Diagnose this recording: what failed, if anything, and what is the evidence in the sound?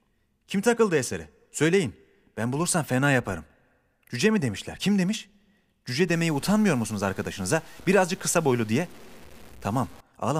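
Low bit depth without dither, from 6.08 s to 10.01 s: the speech turns grainy and quiet stretches sputter. The likely cause is sample-format conversion truncating to 7 bits, leaving error about 30 dB down. The waveform shows staircase steps, and the spectrogram shows broadband hash tracking the speech.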